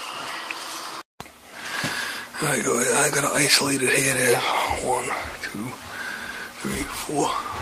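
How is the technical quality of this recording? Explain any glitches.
There is one clear glitch: a skip ahead at about 1.53 to 1.55 s. Roughly a second of audio is missing, dropped while later audio was already queued, either in transit or when the jitter buffer overflowed and discarded material to catch up. Nothing fills the gap, so the two sides are spliced directly and the sound lurches forward. A waveform shows an abrupt change in envelope at the join with no silence between. On a spectrogram, the frequency patterns before and after the seam don't connect.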